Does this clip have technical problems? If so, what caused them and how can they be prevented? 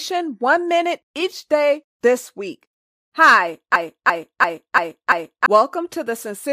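Yes. A system hang loop runs from 3.76 to 5.46 s: the playback system froze while the sound hardware kept replaying its ring buffer, so one 341 ms slice of speech repeats five times at about 2.9 Hz, a machine-gun stutter that fits a 16384-sample buffer and replaces about one and a half seconds of audio. Preventing it means keeping the audio driver and host responsive by avoiding CPU or driver stalls and muting output when the buffer stops being refilled.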